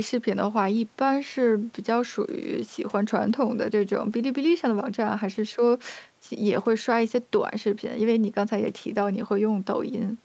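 Nothing is technically wrong with the speech in this clip.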